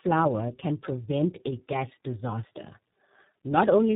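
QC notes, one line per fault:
Throughout, tandem speech coding. The speech passed through two low-rate speech coders in a row, and each one re-coded the already damaged output of the one before. That stacking adds roughness and a warbly, muffled edge beyond what either coder alone would give. Nothing is present above 3.8 kHz. The sound points to a G.723.1-type coder at 6.3 kbit/s, then a clean G.711 hop, then iLBC at 15.2 kbit/s.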